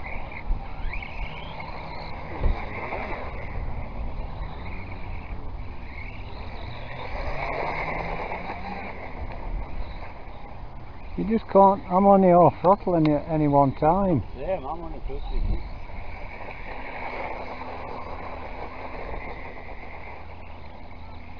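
Nothing is technically wrong with the clip.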